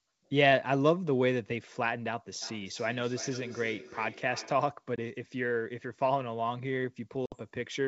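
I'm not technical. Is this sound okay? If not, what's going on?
No. From 2.42 to 4.71 s there is feedback echo between two devices. Two devices on the same call are in one room. One plays the other's sound, and that microphone hears it again. So each bit of speech comes back about every third of a second, fainter and thinner each time.

There is also packet loss on an ADPCM call. At 4.96 s, a 20 ms slice of sound drops to silence. From 7.26 to 7.35 s, 60 ms goes missing. After each gap, the receiving end has lost track of the sender. The speech comes back with a click, slight distortion or the wrong loudness, then settles.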